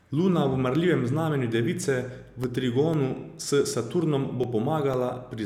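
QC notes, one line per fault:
2.44–4.94 s, periodic USB or driver dropouts: roughly seven brief ticks, spaced exactly 0.5 s apart, each a gap of about a millisecond where the speech is cut to silence, likely because something stalls the USB bus or audio driver on a fixed schedule. The strict clockwork spacing and the tiny, uniform gap set it apart from random clicks or network packet loss, which are irregular and leave longer holes.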